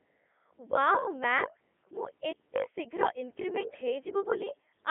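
From start to finish the speech passes through a Codec 2 vocoder, heavily damaged and consistent with its 3.2 kbit/s mode. Only pitch, voicing, energy and a spectral envelope survive, rebuilt from sine waves, so it sounds robotic and buzzy, confined to roughly 250 Hz to 3.4 kHz with nothing above 3.8 kHz.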